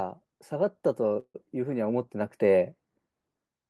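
Speech, with a call audio freeze from 1.19 to 1.36 s. The sound smears into a fading buzz, then about 70 ms of silence, and resumes where it left off. Nothing's lost, just delayed, likely an emptied jitter buffer.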